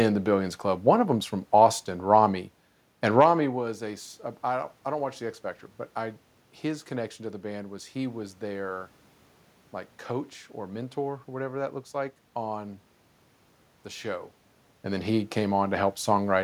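No technical faults occur anywhere in the recording.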